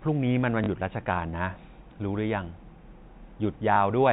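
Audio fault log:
0.64–0.68 s and 3.74–3.76 s, packet loss with last packet repeated: a brief robotic stutter, then a small blip. A 40 ms gap, consistent with two 20 ms packets, then a 20 ms gap were filled by replaying the previous audio out of step with the pitch.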